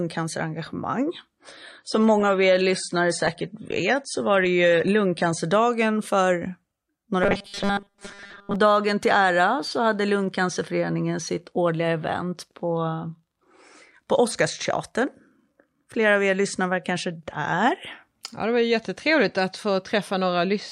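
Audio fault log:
1.39–5.39 s, adaptive stream at a lower bitrate: the top end suddenly vanishes, with nothing above 9.7 kHz and a thin sound with more codec artefacts, with no gap either side. That fits the stream briefly stepping down from about 96 to 32 kbit/s AAC when the connection slowed.
7.23–8.56 s, robotic sound from repeated short buffers: speech turns into a stiff metallic buzz fixed at 200 Hz, clearing right before "dagen till ära så". Likely the player looping the last 5 ms chunk while fresh audio was late, so most of the real sound there is skipped.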